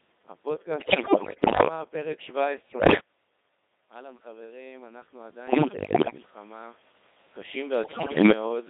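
Throughout, the speech has been through the Codec 2 vocoder, and the damage is heavy. The decoder rebuilds the voice from sine waves driven only by pitch, voicing, energy and a coarse spectral envelope, so the original waveform is gone. The result is buzzy and robotic, confined to roughly 250 Hz to 3.7 kHz, with a density that fits the 2.4 kbit/s mode. Unlike ordinary low-bitrate codec smearing, this is a steady synthetic buzz rather than watery or swirly artefacts. The room noise behind the talker is mangled along with everything else, and the level changes near 3 s and 7 s come from the talker moving, not from the codec.

Bit errors on digital voice radio hit four stretches: 0.78 to 1.68 s, 2.70 to 3.00 s, 5.48 to 6.18 s, and 7.84 to 8.32 s. Around a tenth of the bits are flipped in most of these, nearer 15 percent in the short second burst. Each corrupted bit rewrites the pitch, level or spectrum of a whole frame, so the voice lurches in pitch and loudness, warbles and breaks into bleeps and gibberish. 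Packet loss on a normal codec leaves gaps or smooth concealment instead.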